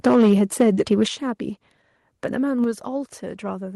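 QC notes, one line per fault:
0.06–0.34 s and 0.60–1.03 s, microphone overload: the loudest syllables carry a harsh, crackling edge where the waveform tops are flattened, which likely comes from input gain driving the converter about 6 dB past full scale. Flat-topped peaks add dense odd harmonics, heard as grit. The first span is clipped heavily across a large share of its samples; the second is milder, with only occasional peaks cut.
0.07 s, 1.08 s and 2.64 s, microphone volume stepped down: the whole signal, voice and background together, drops abruptly in level by about 2 dB, about 8 dB and about 5 dB respectively. This is likely the call software reacting to the overloaded peaks by lowering the device's input volume in single steps. The first step lands inside the first distorted span and the second just after the second one, so each overload is followed by a sudden quieter level.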